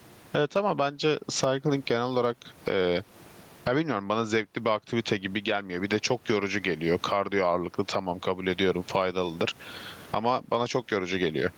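Gain pumping runs throughout: the gain swings around 20 dB, pulling down under loud speech, likely from excessive gain into a fast limiter.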